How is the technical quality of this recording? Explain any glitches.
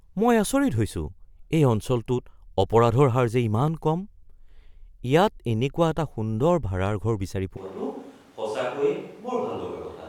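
The recording has one clear glitch near the end. At 7.57 s the speech switches abruptly to a distant microphone and stays that way to the end. It turns roomy and hollow, loses bass, and drops roughly 5 dB, with room noise now sitting only about 25 dB below the speech. The close mic's signal likely dropped out, leaving a pickup farther from the talker that hears more of the room's reflections and noise.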